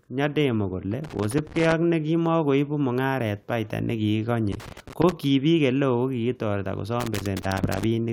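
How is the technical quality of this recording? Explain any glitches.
The speech is marred by three bursts of irregular crackle and scratching, at 0.91 to 1.73 s, 4.52 to 5.12 s and 7.00 to 7.84 s. This is loose connector crackle: a worn or dirty contact rapidly making and breaking, chopping the signal into pops.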